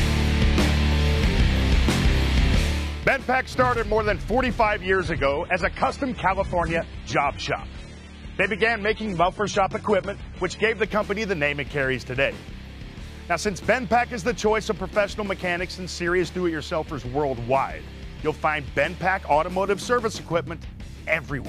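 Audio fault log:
4.83–10.83 s, adaptive stream at a lower bitrate: the connection slowed, so the player switched mid-stream to a cheaper encoding of the same audio for six seconds, which fits a drop from roughly 96 kbit/s AAC to about 32 kbit/s. With fewer bits to spend, the encoder discards the top band, so nothing above 11.7 kHz remains, and codec artefacts rise. The quality changes abruptly at both ends, with no gap.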